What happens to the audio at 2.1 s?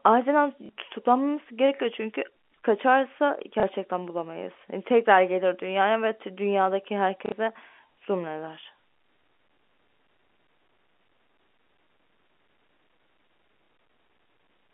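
Nothing goes wrong at 2.1 s: the speech carries on intact through that moment, passing over the usual telephone-band G.711 channel without any break or added disturbance.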